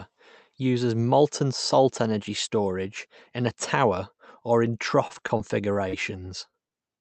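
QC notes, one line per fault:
5.07–5.95 s, repeated packet loss (robotic sound): just after "a tower or in", the stream drops out seven times in under a second, losing about 60 ms of audio, with the longest hole 36 ms. The receiver patches each hole by extending the preceding sound, about 133 ms of synthetic fill in all, roughly 15% of the stretch. Because the holes come in quick succession, the repeated pitch-continued patches give a choppy texture with fragments missing.
6.51–6.55 s and 6.69–6.73 s, short concealed packet loss: two isolated losses of about 20 ms each, filled with about 21 ms and 18 ms of concealment before blending back into the real signal. The decoder continues the last sound through each gap, from its pitch if voiced or as shaped noise if not, so each one is heard as a brief smear or wobble, and a short consonant at either spot may be swallowed. The Opus coding at 32 kbps, with its top near 8 kHz, carries its usual coding noise around both.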